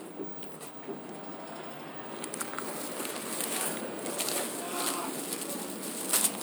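A brief glitch breaks into the sound at 0.65 to 0.71 s and again at 3.63 to 3.67 s. Both come from damaged data in a compressed stream: corrupted bytes made the decoder misread frames and lose sync until it found the next valid frame header.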